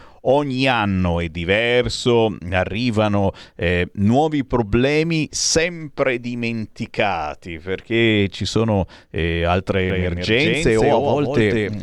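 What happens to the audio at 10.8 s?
At 10.8 s a doubled audio track is running: from 9.9 s, just after "ci sono eh altre", to the end, a second copy of the speech trails by around 150 ms at about 5 dB lower. It is likely a slower capture path or misaligned edit. The copy has no reverb tail and starts abruptly.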